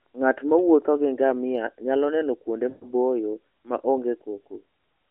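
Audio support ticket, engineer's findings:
Lost AMR speech frames, 2.70–2.85 s: sound smears into a held tone, fades toward silence, then returns weak and rough. About 120 ms gap, which fits six consecutive 20 ms frames. Probable component: radio link into the AMR-NB decoder. Mechanism: corrupted frames concealed by repeating the last good parameters with decaying gain.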